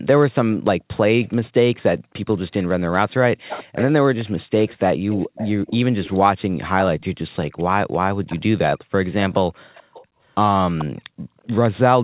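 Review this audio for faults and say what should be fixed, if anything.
A faint, delayed copy of the speech trails the talker by 434 ms at 0.81 to 6.19 s, 6.8 to 8.39 s, 9.74 to 10.05 s, 10.78 to 10.85 s and 11.47 to 11.59 s, well below the main speech and quieter toward the end. This is echo leak, likely from a far-end loudspeaker whose echo canceller let part of the returning audio through.

The room background dips sharply at 2.01 to 2.13 s, 9.83 to 10.19 s and 11.02 to 11.37 s, by about 40 dB, about 27 dB and about 40 dB, each dip lasting from roughly a tenth of a second to a few tenths. This is background gated by the echo canceller, which clamped the microphone hard while its loudspeaker was playing.

To prevent both, the far end should use a headset or a better-tuned echo canceller that removes the full echo without heavy suppression.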